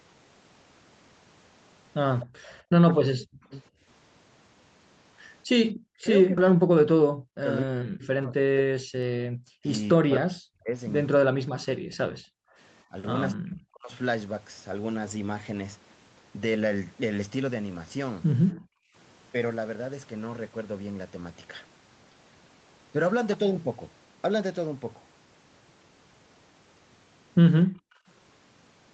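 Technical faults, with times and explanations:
2.2–2.61 s, echo leak: a faint delayed copy of the speech trails the talker by 247 ms at about 20 dB below it. This is likely a loudspeaker on the far end whose echo canceller failed to remove everything its microphone picked up, so the residue was sent back down the line.
2.26–2.43 s, 3.82–3.87 s, 8.96–9.30 s, 18.54–18.95 s and 27.66–28.07 s, background gated by the echo canceller: the room sound briefly sinks, by about 10 dB at 3.82 s and about 40 dB at the others. The canceller clamps the microphone while the loudspeaker plays, then releases it.
3.35–3.64 s and 5.83–13.92 s, speech suppressed in double talk: the talker's speech dips by around 40 dB, totalling roughly five seconds in the longer stretch. Both sides are likely talking at once, and the canceller, unable to separate them, turns everything down.
6.37–6.39 s, skip ahead: playback jumps straight forward with no gap, dropping roughly 0.7 s of speech. 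The lost stretch was discarded, in transit or by an overfilled jitter buffer, while later audio was already queued, so the two sides of the jump are joined almost directly.
6.47–8.40 s, jitter buffer speed-up: the speech runs at 108% speed with unchanged pitch and sounds hurried. Having built up excess delay, the receiver trims short pitch-period slices repeatedly, removing roughly 150 ms in total to catch up.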